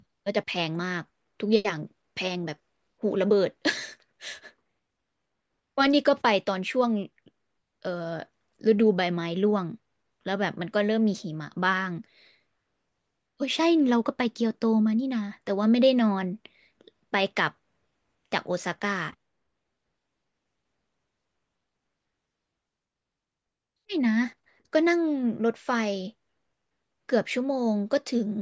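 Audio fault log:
Nothing to log here, as the speech comes across with no faults to report anywhere in the clip.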